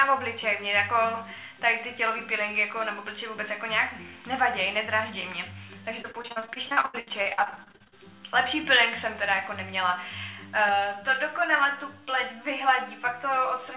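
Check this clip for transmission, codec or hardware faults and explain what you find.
Two faults are audible, one in the middle of the clip and one at the end, over a call path whose sound stops at 4 kHz, consistent with a G.711 A-law codec.

Repeated packet loss (robotic sound), 6.02 to 7.94 s: many short holes, the longest 79 ms, are patched by extending the preceding sound, covering about 40% of the stretch. The result is choppy, with pieces missing.

Channel delay (comb filtering), 10.69 s to the end: one channel lags the other by roughly 10 ms and is summed to mono, cutting regular notches from around 50 Hz. The sound is hollow and phasey.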